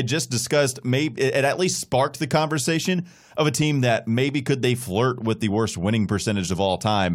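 No technical faults can be heard anywhere in it.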